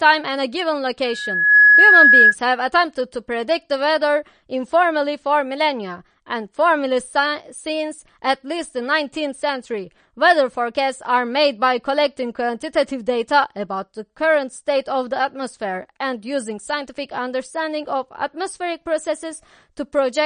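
Throughout the speech, plainly audible watery swirling and nothing above 9.6 kHz point to low-bitrate compression, likely MP3 at around 40 kbps, dropping weak frequency lines.

A loudspeaker feedback squeal runs from 1.04 to 2.35 s. The loop gain exceeds one at 1.7 kHz, and a tone swells over about half a second to roughly 10 dB above the speech.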